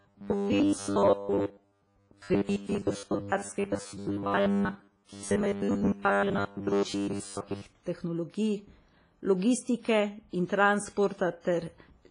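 It's a speech clip, and from 0.01 to 7.66 s it has that robotic sound from repeated short buffers: a rigid, metallic buzz at 100 Hz, which points to roughly 10 ms chunks being replayed for most of that stretch while fresh audio is dropped, likely from input arriving too seldom. Throughout, there's heavy WMA compression, with nothing above about 10.1 kHz and a washy, ringing quality where quantisation noise smears across long transform blocks, which fits an older WMA encoder running at a low bitrate around 24 kbps.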